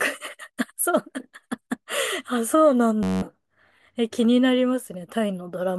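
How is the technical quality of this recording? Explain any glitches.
One glitch stands out. From 3.03 to 3.22 s there is a system hang loop: the playback system stalled while the audio hardware kept replaying one 10.67 ms slice of speech, which fits a 512-sample buffer. It repeats about 18 times, producing a steady buzz near 94 Hz and dropping roughly 0.2 s of audio.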